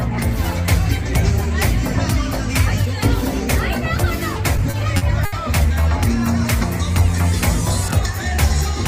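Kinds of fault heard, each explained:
Repeated stalls (stutter): Late packets kept draining the jitter buffer. Between 4.57 and 5.35 s, four short gaps, the longest 70 ms, were filled with continued sound, so it drags.
Train of clicks: From 6.2 s to the end, regular clicks tick about five times per second, roughly as loud as the sound, likely from nearby interference or a faulty connection.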